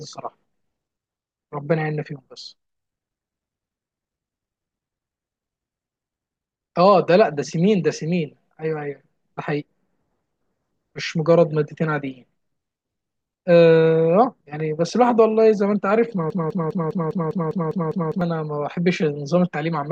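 From 16.30 s to 18.21 s a broken-record loop takes over: one 0.2 s fragment of speech repeats nine times, identical and back to back, replacing what should have played. A stalled player or stream likely resent its last fragment. Unlike echo, nothing fades or overlaps.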